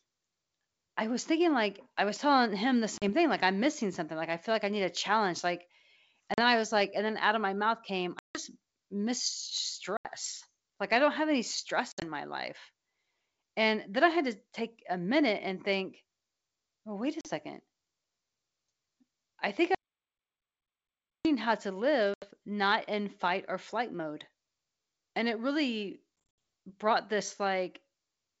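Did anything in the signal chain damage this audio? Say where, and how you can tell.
Yes, two kinds of damage.

First, packet loss on an ADPCM call, a network-stage fault. There are hard-edged holes at 2.98, 6.34, 8.19, 9.97, 11.92, 17.21, 22.14 and 26.16 s. Most are 40 to 80 ms long. The one at 8.19 s is 160 ms, and the losses at 11.92 and 26.16 s are scattered runs, with 130 ms missing over 220 ms at the last one. After each gap the speech comes back slightly distorted, then settles within tens of milliseconds. That happens because the decoder's step size and predictor have drifted from the sender's and have to catch up. The gap sizes fit packets of around 10 ms each.

Second, an audio dropout to silence from 19.75 to 21.25 s, about 1.5 s of silence with no room tone, cut in mid-flow. Network loss doesn't explain a gap that long and that clean. The likely cause is the input itself disappearing, such as a device disconnect, a failed capture link or a stray mute, while the recorder kept writing silence. 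Whatever was said in that stretch is simply gone.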